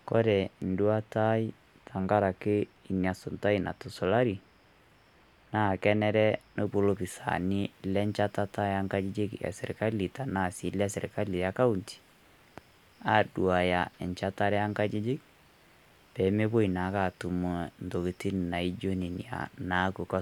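From 6.66 s to the end, pre-emphasis is left on. The treble boost was applied but the matching de-emphasis cut never was. Highs sit about 8 dB hot at 10 kHz, consistent with the CD 50/15 µs curve. Speech turns thin, bright and sibilant.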